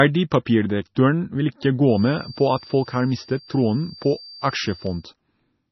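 MP3 compression runs throughout: the speech sounds heavily watery and swirly with nothing above 5.9 kHz, likely from encoding at a low bitrate around 24 kbps that discarded weak frequency detail.

A feedback whistle runs from 1.83 to 5.09 s: a steady 4.7 kHz tone about 25 dB under the speech, likely a speaker-to-microphone loop ringing just short of a full howl.

A bit error spike at 4.87 s is a single sharp broadband tick, where a flipped bit made a couple of samples jump and snap back.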